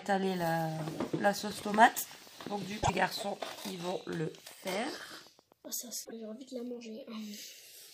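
From 1.76 to 5.66 s, a train of clicks, around thirty evenly spaced ticks at 7.85 per second, likely from interference, appears as regular thin vertical lines across the spectrogram. Damaged data in the compressed stream at 2.80–2.90 s and 6.01–6.13 s makes the decoder lose sync and search for the next frame header.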